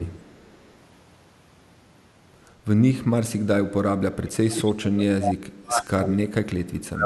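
From 0 to 0.22 s the speech dips briefly by roughly 10 dB, then from 4.06 s to the end it sinks far deeper, around 35 dB. This is likely speech suppressed in double talk. Unlike a packet dropout's clean gap, the level is turned down.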